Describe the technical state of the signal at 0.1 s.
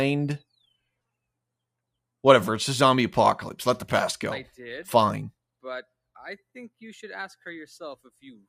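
At 0.1 s the signal is intact, with no dropout, distortion, glitch or other fault audible at that moment.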